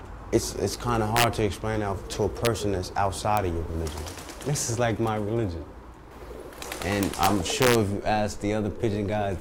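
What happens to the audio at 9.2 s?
Nothing goes wrong at 9.2 s; the audio plays through that moment intact, with no dropout, click or distortion.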